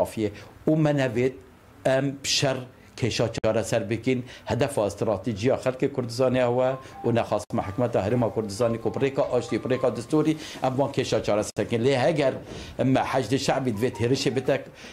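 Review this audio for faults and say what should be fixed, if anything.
Separately encoded pieces were joined without trimming each one's encoder delay and final-frame padding, leaving a gap at each join of encoded pieces: silences at 3.38–3.44 s (56 ms), 7.44–7.50 s and 11.50–11.57 s (64 ms each), roughly every 4 s, with edges smeared by the codec before the sound resumes where it stopped. Encode the material in one pass, or trim each piece's priming delay and end padding before joining.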